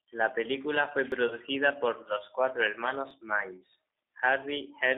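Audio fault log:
throughout: G.729 codec. The speech passes through an 8 kbit/s G.729A coder that rebuilds it from a vocal tract filter, pitch and sparse pulses, so it sounds rough and synthetic. The spectrogram shows a 300 Hz to 3.7 kHz band with nothing above.
1.12 s and 3.11 s: audio missing between chunks. Right after "película fue" and again after "por los cuatro", around 15 ms of sound skips. These are likely gaps where a processor working in 2-second chunks switches chunks. On the waveform the two sides butt together with no silence and a small step.
1.27–1.38 s: VoIP packet loss concealed by the speech codec. Between "película fue" and "por los cuatro", 30 ms of audio is missing, which fits a single lost packet. The decoder repeats its last pitch and filter as a fading buzz, and the voice stays weak afterwards. The spectrogram shows smeared, flattened harmonics dimming across the span.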